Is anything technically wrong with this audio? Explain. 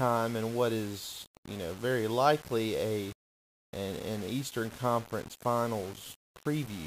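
Yes. Throughout the speech there is grainy, gritty distortion that rises and falls with the voice, likely low bit depth without dither, about 6 bits rounded. The error sits only around 20 dB down and tracks the signal, unlike dithered requantisation's steady, signal-independent hiss.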